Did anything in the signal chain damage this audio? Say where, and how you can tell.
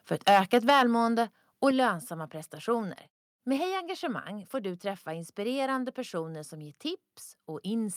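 Yes. Right after "för ett", from 0.27 to 0.83 s, the peaks are flat-topped and crackly, driven about 10 dB past full scale with around one in twenty samples clipped. That's likely microphone overload at the converter stage: input gain set too hot.

Then the level drops in three sudden steps: about 4 dB at 0.70 s, about 6 dB at 1.71 s just before "lönsamma prestationer", and about 2 dB at 3.57 s. Voice and background fall together, which points to microphone volume stepped down, likely by the call processing's input-gain control.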